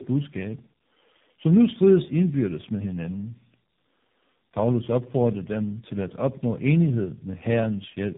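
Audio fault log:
Throughout: tandem speech coding. The speech passes through AMR-NB at 7.4 kbit/s, G.726 at 24 kbit/s, then AMR-NB again, compounding roughness and warble, with nothing above 3.7 kHz.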